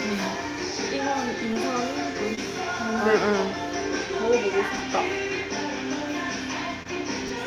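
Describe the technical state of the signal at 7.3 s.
At 7.28 to 7.30 s the audio has chunks out of order. A 10 ms chunk arrives one chunk late and plays after the chunk that should follow it. Nothing is missing, but the sequence is swapped, leaving three hard joins within about 20 ms. It is heard as a brief jumbled flick. On the waveform, the segment boundaries show abrupt steps. On the spectrogram, thin vertical broadband streaks mark each join.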